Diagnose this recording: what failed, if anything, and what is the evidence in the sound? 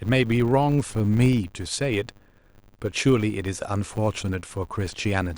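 Filter restarted on every block, throughout the speech: a 100 Hz buzz tracking level points to processing-stage filtering that starts each 10 ms block from zero state, leaving a small transient at every block.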